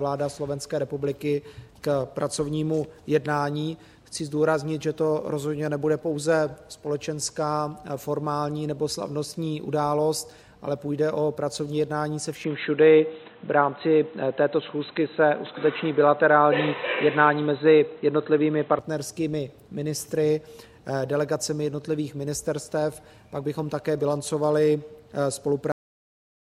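At 12.44 s the recording most likely switched its input to a poorer device, a different microphone or a headset's call profile. Nothing above 4 kHz survives, so the sound turns dull and boxy with no gap at the switch, the level shifts by roughly 5 dB, and a new noise floor appears about 40 dB down, until the fuller sound returns at 18.79 s.

At 25.72 s the final buffers were never written out, leaving a cut-off end: the audio halts mid-sound and falls straight to digital silence with no natural decay, an abrupt stop rather than a fade or release.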